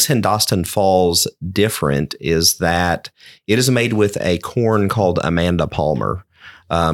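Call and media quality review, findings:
Overlapping chunks, speech: brief stutter at 1.20 s, just before "different is that it", and again at 4.22 s, before "a corn called". Roughly 3 s apart. Chunked processing or transport stage, each chunk starting before the previous one ended. About 20 ms replayed at each join, heard as a click-like repeat. Spacing fits 3 s chunks; check chunk boundary handling and overlap/trim logic.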